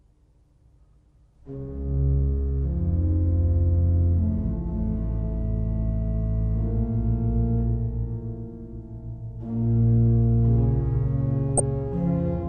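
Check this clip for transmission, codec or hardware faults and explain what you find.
Two faults are audible: steady codec damage throughout and a brief burst of reception errors near the end.

MP2 compression, likely the cause of the steady damage: MPEG Layer II coding at a low bitrate, which fits about 80 kbps, switches off upper sub-bands and quantises the rest coarsely. Throughout, the sound is dull, with a flickering, gurgling, granular roughness.

DAB burbling, from 11.49 to 11.6 s: bit errors got past error correction into the MP2 data, corrupting samples in single sub-bands. The damage spans roughly six frames and fits an error rate around a tenth of a percent, heard as short blips of noise.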